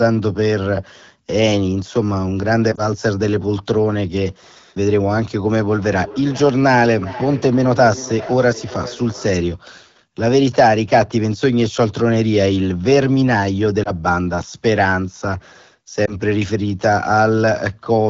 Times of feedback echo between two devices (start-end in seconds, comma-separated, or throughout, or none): 5.65-9.62